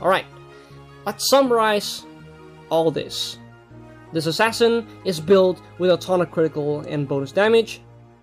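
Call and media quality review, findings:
No audible faults found.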